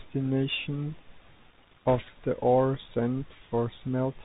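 Throughout the speech, the Bluetooth CVSD headset codec is plainly audible: nothing passes above 4 kHz, a granular hiss sits under the voice, and s sounds turn scratchy where loud high content outruns the adapting one-bit step size, consistent with a 64 kbps CVSD link.

From 1.86 to 2.00 s, just before "the ore", bit errors on a Bluetooth voice link add a brief rushing, crackly noise. The rate points to roughly one bit in seventy flipped. Each bit carries little weight and errors decay, so there are no hard clicks.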